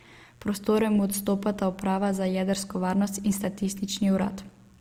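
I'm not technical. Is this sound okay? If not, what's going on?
No. Mains buzz runs through the whole recording: a faint, raspy hum behind the speech. Electrical interference from the power supply, which sends sharp spikes twice in each of its sixty cycles a second, leaked into the recording as a buzz with many higher tones.

Low-bitrate audio saved at a high bitrate also runs throughout. The file is large, but the flaws of an earlier, smaller version are still there. It was likely squeezed hard into a small format first, then saved again in a roomier one, which cannot bring back what was lost.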